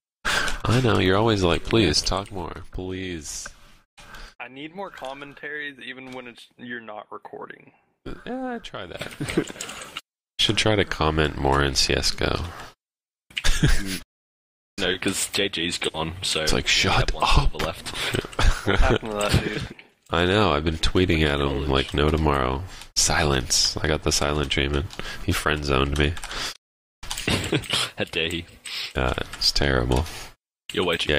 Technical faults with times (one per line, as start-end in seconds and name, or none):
1.95-2.51 zipper noise
8.92-9.29 zipper noise